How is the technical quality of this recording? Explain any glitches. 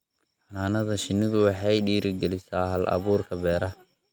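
Nothing to flag here; I don't hear any glitches anywhere in this recording.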